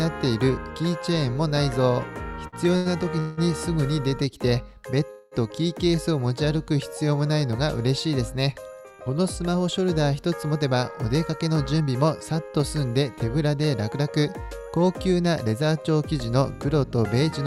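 Late packets emptied the jitter buffer at 2.47 and 2.77 s. These short stalls from a late packet hold the preceding sound 52 and 88 ms too long before it carries on.

At 3.19 and 5.10 s comes a call audio freeze, likely from packets held up in transit. The last sound continues as a fading buzz or hiss for 0.18 and 0.21 s, then resumes where it stopped.

An overfull buffer then drives jitter buffer speed-up, which trims pitch-period pieces. From 10.63 to 12.49 s the sound runs at 110% speed, dropping around 200 ms. From 15.26 to 16.43 s it runs at 107%, dropping around 100 ms. Both passages sound hurried at unchanged pitch.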